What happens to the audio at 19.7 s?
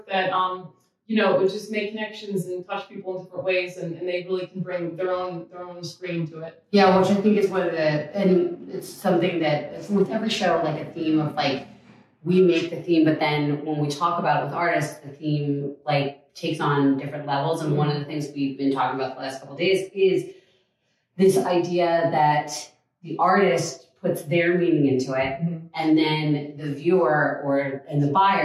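Nothing goes wrong at 19.7 s: the audio carries on there without any dropout, glitch or other audible fault.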